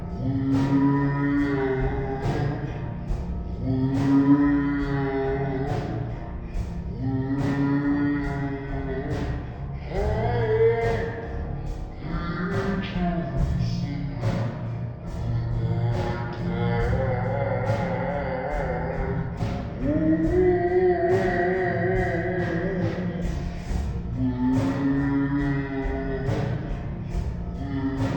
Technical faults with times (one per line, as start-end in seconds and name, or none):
0.00-28.17 stereo read as mono